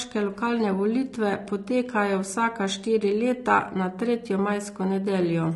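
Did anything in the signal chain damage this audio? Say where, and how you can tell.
Yes, at the codec stage, throughout the speech. The speech sounds rough and grainy, with noise filling between the harmonics and a thin, synthetic top band, most likely low-delay AAC compression (AAC-ELD) at a rate around 32 kbps. Its short frames smear pitch harmonics, unlike the pre-echo of long-frame codecs.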